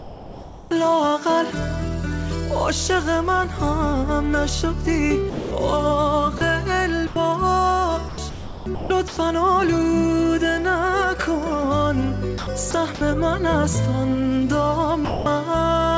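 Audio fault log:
0.00–0.71 s, 5.30–5.51 s, 6.38–6.41 s, 7.07–7.16 s, 15.05–15.26 s: sound dropped by the voice detector. The sound gives way to smooth, steady comfort noise, then returns. The sender's voice detector likely misread the sound as background and stopped sending. The gaps run 30 to 210 ms; the opening one lasts 0.71 s and loses about 450 ms of sound.
8.09–9.17 s, 12.38–13.01 s: sound chopped by the voice detector. Sending switches on and off repeatedly, so the sound turns choppy, likely from the voice detector toggling. About 690 ms and 180 ms are replaced, respectively.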